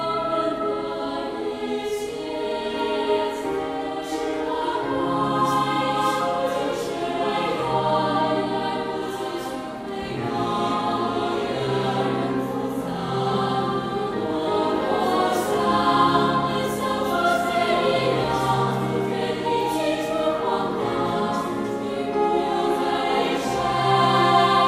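Nothing in the signal points to a technical fault at any point in the recording.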